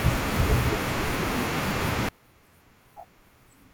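From 2.09 s to the end at 3.74 s, the speech collapses by about 32 dB into a faint residue, likely from one channel inverted, so the shared centre cancels in mono. Unlike a dropout, a trace of difference signal survives rather than true silence.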